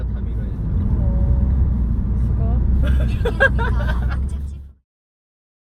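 No technical faults are present.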